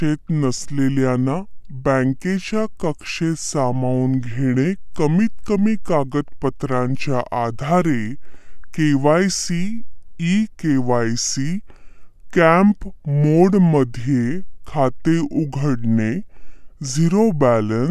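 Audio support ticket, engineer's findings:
Wrong sample rate, whole clip. Playback clock slower than the capture clock, samples passed through with no conversion; the 2:3 ratio fits 48 kHz material played out at 32 kHz. Result: speech runs at 0.667 speed, pitch down 7.02 semitones, voices low and dragging, timing stretched evenly. Check output device rate negotiation and resampler bypass.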